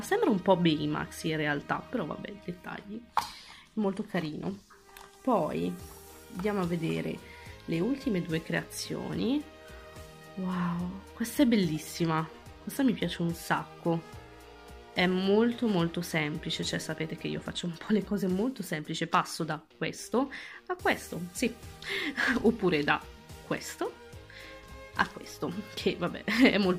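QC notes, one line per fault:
14.09 s and 20.35 s, dropped samples: a single sharp click at each point, with nothing audibly missing. Likely a handful of samples lost, a tiny fraction of a millisecond, so the waveform jumps straight to a later value and the step is heard as a click.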